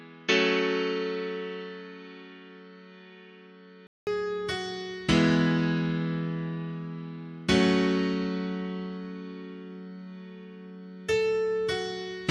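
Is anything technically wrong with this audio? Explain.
Yes. From 0.0 to 4.07 s the audio is dull, with nothing above 6.7 kHz, about 5 dB quieter, and carries a faint new noise floor. A 200 ms gap then precedes fuller sound, likely an input switched to a poorer device.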